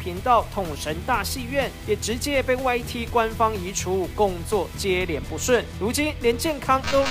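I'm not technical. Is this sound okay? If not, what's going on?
No, from the start to about 4.98 s there's a gritty, grainy edge that shifts with the sound, likely low bit depth without dither, as if stored with only about 7 bits.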